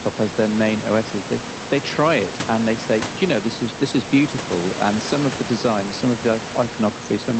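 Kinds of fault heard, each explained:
Nothing here stands out as a fault, so there's nothing to list for this one.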